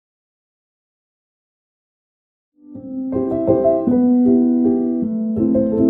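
No technical faults are present.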